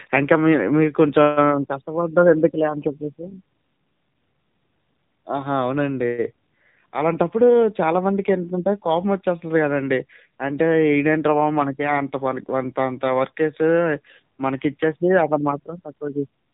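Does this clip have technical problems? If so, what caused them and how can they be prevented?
Yes. AMR narrowband mobile codec, throughout: speech is cut off above 4 kHz and sounds plainly buzzy and synthetic, which fits a low AMR-NB mode around 7.4 kbps. Prevent it by carrying calls over a wideband codec or using a higher AMR mode.

AMR bit errors, 3.23 to 3.35 s: for about six 20 ms frames, speech keeps its pitch and level but turns hoarse and scratchy. Flipped, weakly protected bits misplaced the excitation pulses and skewed the gain and spectrum values. The error rate here sounds like a few percent. Prevent it with a stronger radio link or more robust channel coding.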